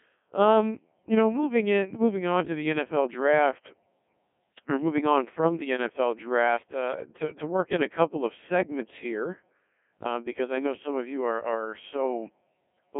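Throughout the speech, a Codec 2 vocoder has replaced the waveform with sine-wave resynthesis from pitch, voicing and envelope data, at what sounds like about 1.6 kbit/s. The result is heavily robotic and buzzy, confined to roughly 200 Hz to 3.5 kHz, with nothing above 3.8 kHz.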